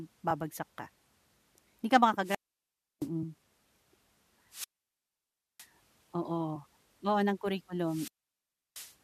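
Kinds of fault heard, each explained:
Damaged data in a compressed stream: a few bad bytes trip up the decoder, so it misreads a frame and has to hunt for the next header to get back in sync. Here that's a quick chirp or blip at 0.30 s and again at 3.22 s.
Wireless microphone squelch dropout: the FM radio link fades, hiss swells, and the receiver's squelch mutes the output. It happens three times, starting around 2.22, 4.50 and 7.84 s, leaving near-silent holes of about 0.67, 0.96 and 0.68 s before the speech comes back.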